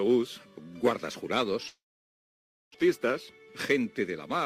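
At 1.67 s the sound smears into a short fading buzz, then drops to near-silence for roughly 0.94 s until it resumes at 2.76 s, skipping about 720 ms and shifting the timing by around 300 ms. This is likely a long network dropout.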